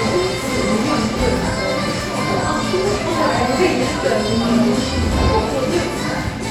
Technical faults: none

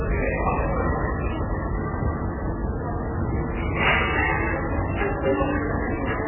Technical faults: MP3 compression

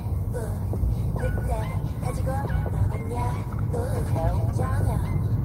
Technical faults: call bitrate drop

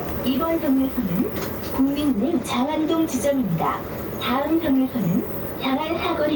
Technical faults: gain pumping

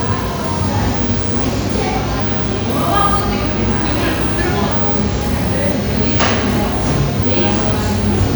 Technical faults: low-bitrate audio saved at a high bitrate

